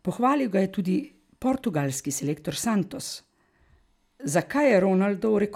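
From 2.86 s to 4.71 s, just after "je tudi portugalski selektor", periodic USB or driver dropouts occur every 64 ms. Each skips a tiny sliver of samples, producing around thirty regular ticks over the speech. A spectrogram shows evenly spaced thin vertical broadband lines, and the waveform shows small abrupt steps.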